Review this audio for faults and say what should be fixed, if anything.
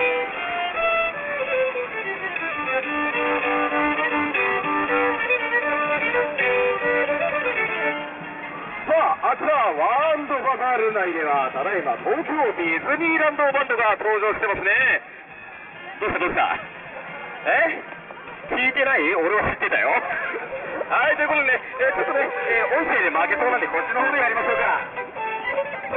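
Aliasing runs through the whole clip. Energy that belonged above 3 kHz has folded back below it as unrelated, inharmonic tones sitting only around 10 dB under the wanted sound, making high detail gritty and metallic. The spectrum runs hard up to a 3 kHz edge, which points to downsampling to a rate of about 6 kHz with no anti-alias filter. To prevent it, low-pass filter below the new half-rate before reducing the sample rate.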